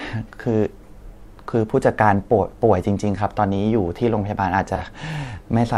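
At 4.76 to 4.81 s there is a brief AAC frame loss with concealment. For about 43 ms, which fits a single lost frame, the decoder had no fresh data and rebuilt the gap from the preceding spectrum, so the sound turns smeared and noisy rather than dropping out. On a spectrogram this shows as a thin vertical band where the harmonic detail blurs into a flat, copied texture. The waveform keeps its level but loses its fine structure there.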